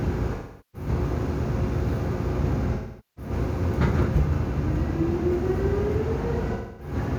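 AAC frame loss with concealment hits at 0.35 s, 2.74 s and 6.53 s. About 0.38 s, 0.43 s and 0.26 s of coded sound go missing. The decoder rebuilds each gap from the last good spectrum, so the sound turns smeared and synthetic there.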